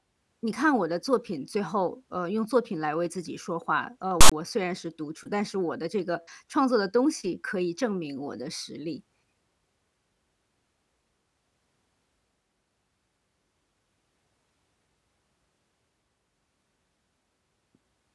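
A speech recording with one burst of file tags played as audio from 4.21 to 4.32 s: a loud, lopsided rasp from text bytes, then dead silence from zero padding. The hard edges and that rasp-then-silence pattern set it apart from an ordinary dropout or random noise burst.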